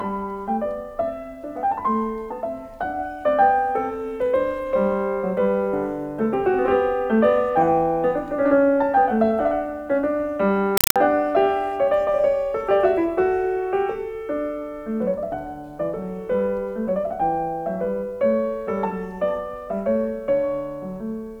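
Compressed stream played as audio, from 10.77 to 10.96 s: an undecoded AC-3 bitstream, which fits a 192 kbps stream, is treated as plain samples. Each 4 ms noise burst and its silent padding repeats 31.25 times a second, giving loud, chattering static.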